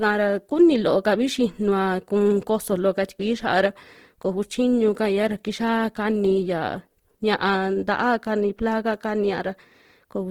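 From start to end the speech has a rough, grainy, noisy texture rather than the swirling, hollow holes of MP3, with content still reaching about 20.2 kHz. This is likely Opus compression in its music mode, where sparse bands are refilled with noise, which fits a low rate near 16 kbps.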